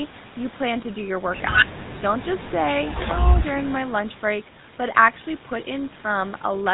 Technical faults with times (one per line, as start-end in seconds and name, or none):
0.00-6.73 GSM full-rate codec